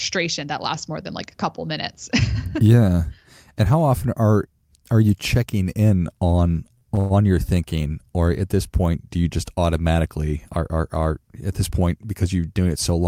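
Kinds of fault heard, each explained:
Repeated stalls (stutter): Packets reached the receiver late, so its jitter buffer ran dry four times between 6.65 and 7.12 s, just after "you checking in on". Each time the receiver stretched the last sound to bridge the wait, 166 ms in all, with the longest hold at 112 ms. Nothing is lost, but about a third of that stretch is filler, so the speech drags and catches in a halting stutter.
Jitter buffer speed-up: The jitter buffer held more audio than it aims for. To cut the extra delay, the receiver trimmed several short pitch-period slices in quick succession, removing about 40 ms between 11.71 and 12.05 s, right after "are are at this". The speech there runs at 108% of normal speed while its pitch stays unchanged, so that brief phrase sounds slightly rushed.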